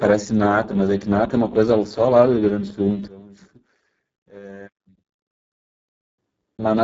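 From the start the speech sounds hoarse, buzzy and robotic, with nothing above 7.7 kHz: heavy Speex codec damage, which fits a bitrate near 6 kbps. From 3.08 to 6.18 s the sound drops by about 22 dB to a faint remnant, likely from one channel inverted cancelling the shared centre in mono.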